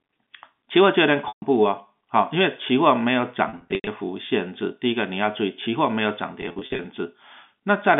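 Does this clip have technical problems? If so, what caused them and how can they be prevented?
Yes, there's packet loss with pitch repetition in three spots: 1.28 to 1.42 s (a solid 140 ms gap), 3.49 to 3.87 s (240 ms lost, scattered, longest run 90 ms), and 6.42 to 6.84 s (200 ms lost, runs no longer than 40 ms). The receiver loops the last pitch cycle and fades it, so you hear a held, buzzy smear and dropouts, which fits 10 ms packets. The telephone-band G.711 coding underneath is fine. To prevent it, fix the lossy network path or add a bigger jitter buffer or FEC.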